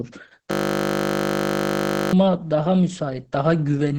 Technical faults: Opus voice compression; system hang loop

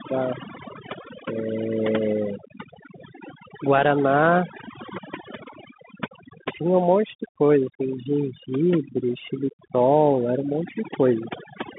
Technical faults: overdone noise removal; Bluetooth CVSD headset codec

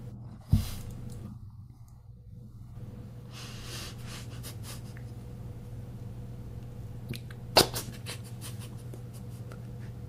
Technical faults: damaged data in a compressed stream

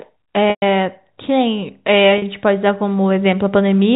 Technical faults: packet loss with pitch repetition

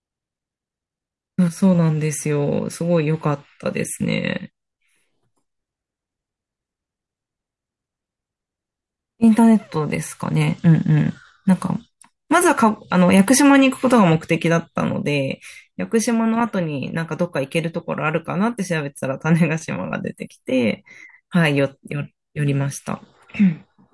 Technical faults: none

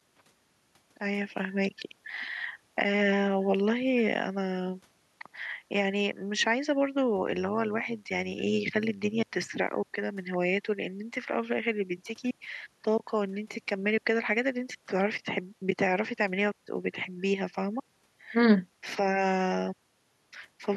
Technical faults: overlap-add ripple

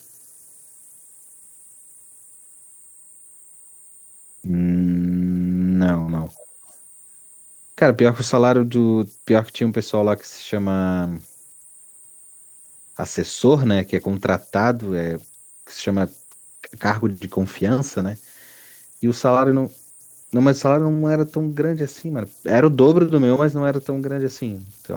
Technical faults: converter idle tones; burst of packet loss; echo leak

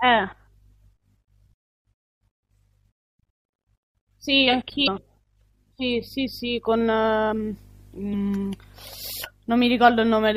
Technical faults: MP3 compression; damaged data in a compressed stream

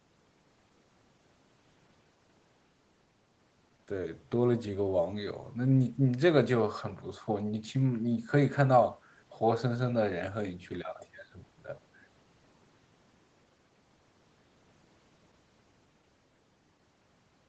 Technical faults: none

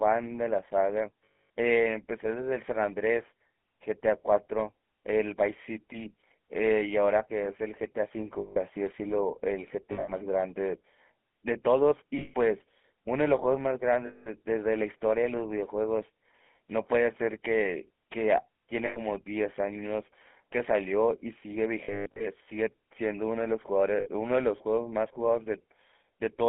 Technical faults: GSM full-rate codec; lost GSM frames

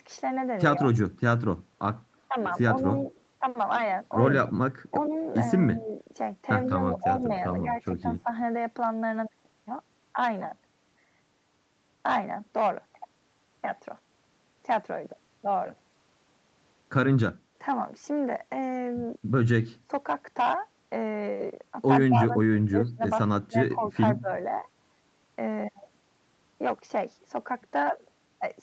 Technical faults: speech suppressed in double talk; echo leak

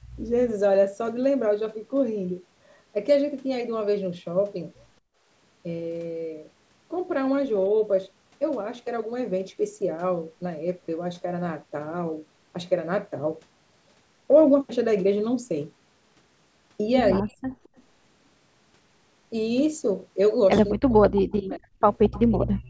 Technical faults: background gated by the echo canceller; speech suppressed in double talk; echo leak

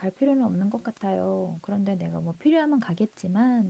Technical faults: none

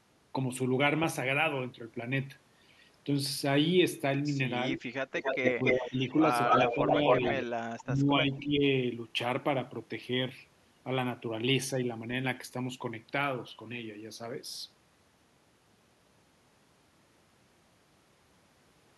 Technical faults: echo leak; speech suppressed in double talk

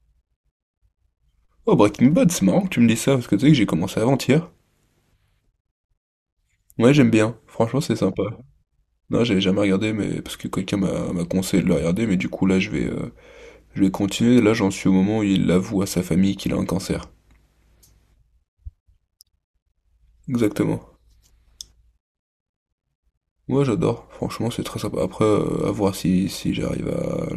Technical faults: none

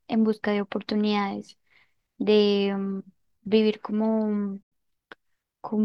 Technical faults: digital broadcast dropout

